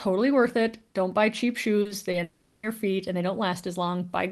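A brief smear lands right after "buy cheap" in this speech recording, running from about 1.81 to 1.91 s, with a smaller wobble at 2.11 to 2.15 s. These are short concealed packet losses: a few tens of milliseconds of audio at a time arrived too late for the decoder, so the receiver stretched the preceding sound across each gap and blended back into the real signal. Just before "feet and they", from 2.23 to 2.65 s, the sound turns into a fading buzz or hiss that runs for about 400 ms before normal audio resumes, and whatever belonged in that stretch is gone. That behaviour points to a long network dropout as the likely cause, with the receiver filling the whole gap with synthesized sound. The call codec's coding noise and its high-frequency cut-off near 12 kHz are present throughout, which fits Opus at a fairly low bitrate of around 24 kbps.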